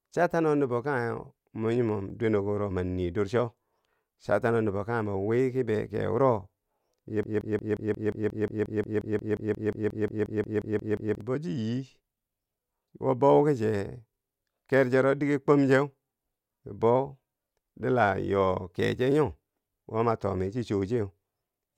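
Speech, with a broken-record loop from 7.23 to 11.21 s: a fragment of about 0.18 s repeats exactly, back to back, around 22 times, so roughly 4 s of the real speech never arrives. The likely cause is a stalled player, encoder or stream that kept resending the last piece it held. Unlike an echo or reverb tail, the copies don't decay or overlap. Each one is identical and full level, and the sound jumps forward when the loop ends.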